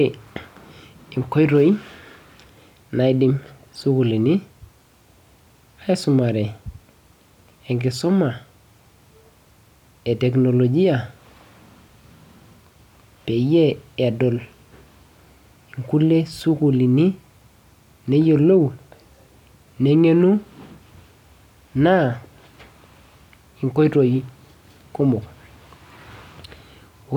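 Block size mismatch (truncated), present throughout the speech clip: one stage hands over audio in blocks longer than the next stage accepts, so the tail of every block is discarded. The cut repeats at each block boundary, producing a steady buzz at 46.9 Hz that sits under the whole recording, which fits 1024-sample blocks at a 48 kHz rate. So little is dropped that the speech runs at its normal speed and pitch.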